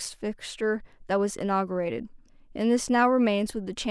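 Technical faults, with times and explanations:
No technical faults can be heard in the speech recording; the signal level, continuity and timing stay steady with no disruptions at any point.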